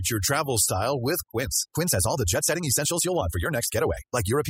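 Speech recorded with overdone noise removal throughout: the reduction was set so strong that frequency bands near the estimated noise floor are pulled down or cut entirely, taking the quieter parts of the voice with them, so the background sits in near silence with twinkling specks. From 1.26 s to the end the pace jumps to about 1.55 times normal while the pitch holds steady, giving a rushed delivery. The likely cause is a time-stretched section, where software shortened the audio by dropping short pieces to preserve pitch.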